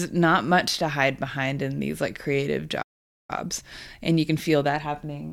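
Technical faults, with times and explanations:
2.82 to 3.30 s, playback stall: right after "in these like creative" the speech cuts to silence for about 0.46 s, then resumes. The halt is most likely the player running short of buffered data or its output thread being held up, so nothing reached the output until it recovered. Unlike a packet-loss dropout, which clips a brief piece out of the sound, this is a long clean gap in mid-flow.
3.30 to 5.32 s, time-compressed catch-up: from the restart to the end, the speech runs about 1.15 times faster while its pitch stays put. The player is clearing the backlog left by the stall by cutting tiny slices out of the signal and cross-fading the joins. Speeding playback through resampling would raise the pitch along with the tempo. Here only the tempo rises.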